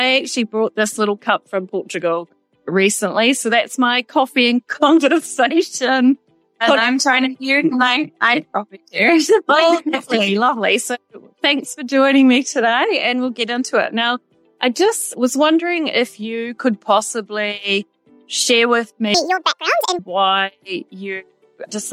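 From 19.14 to 19.99 s, a section at the wrong speed plays 1.78 times too fast. Pitch jumps up by roughly ten semitones, and everything sounds high and rushed. Then normal speed returns. The likely cause is playback against a mismatched clock.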